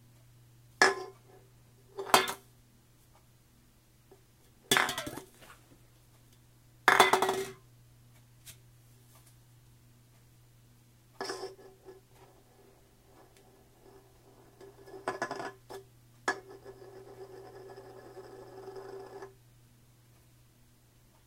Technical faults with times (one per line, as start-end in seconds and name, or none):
none